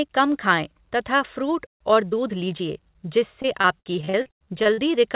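It's a speech clip over a call line, and the band stops at 4 kHz, which fits a narrowband G.711-style codec. At 1.66 s there's a playback stall: about 132 ms of silence, most likely the player running dry or getting blocked. From 1.81 to 2.69 s you get time-compressed catch-up, with the speech hurried along at 1.15x but at normal pitch. Then from 3.42 to 4.80 s there's repeated packet loss with that robotic sound: over a dozen short holes, the longest 95 ms, each patched by smearing the last sound. Roughly a third of that stretch is filled-in audio.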